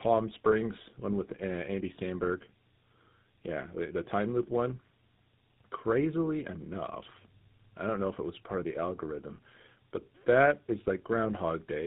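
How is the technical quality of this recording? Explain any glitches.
The quality is degraded, with one fault lasting the whole clip. Throughout, tandem speech coding: GSM full rate re-coded speech already damaged by AMR-NB. It sounds rough, warbly and muffled, with nothing above 3.8 kHz.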